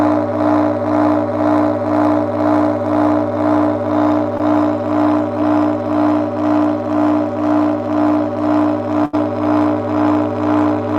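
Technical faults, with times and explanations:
4.37 to 4.41 s, short concealed packet loss: about 20 ms of audio never arrived, and the receiver spent about 17 ms extending the preceding sound before blending back, causing a brief smear. A spectrogram shows a small, blurred vertical seam.
9.05 to 9.15 s, burst of packet loss: consecutive packets were lost, removing about 80 ms. For about 78 ms the decoder continued the last sound while turning it down, producing a held buzz or fading hiss before audio resumes. The spectrogram shows smeared, decaying energy; the waveform tapers.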